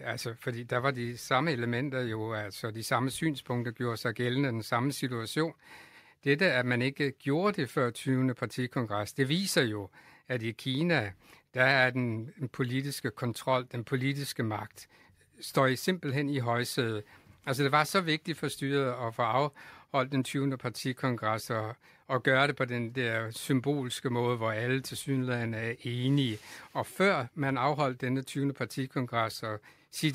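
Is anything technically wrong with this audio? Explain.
No, nothing in this speech recording stood out as a technical problem on listening.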